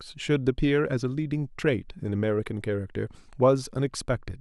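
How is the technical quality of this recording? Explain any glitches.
No glitches can be heard.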